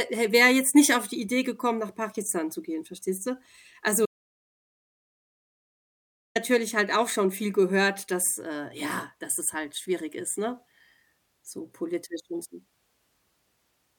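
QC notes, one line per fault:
4.06 to 6.36 s, audio dropout to silence. The speech cuts off mid-flow and returns at "halt auch schon viel" after about 2.3 s of silence, with no room tone. The input was likely lost while recording continued. That stretch is gone.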